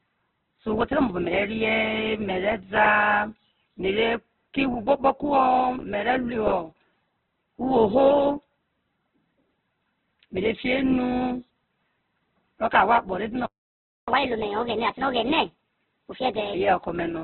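Opus compression, throughout the clip: the speech is heavily damaged, with nothing above 4.3 kHz, so it sounds narrowband and boxy, and the remaining tones come across as grainy, rough and noisy rather than swirly. That fits the likely cause, Opus running in its music-oriented CELT mode at a very low bitrate, around 8 kbps. With so few bits, the encoder keeps each band's energy but fills the detail with folded or noise-like content.

Playback stall, 13.46 to 14.08 s: the speech cuts out mid-flow and the output goes silent for about 0.62 s before resuming. This sounds like the player ran out of buffered data or had its audio thread blocked. It had nothing to send to the output until it recovered, producing an abrupt gap rather than a fade.

Catch-up at higher speed, 14.08 to 16.54 s: immediately after the gap, the speech plays 1.25 times faster and about four semitones higher, so it sounds hurried and slightly chipmunk-like. 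The player is working through its accumulated backlog by resampling, which raises speed and pitch together. Once the lost time is recovered at 16.54 s, both drop back to normal.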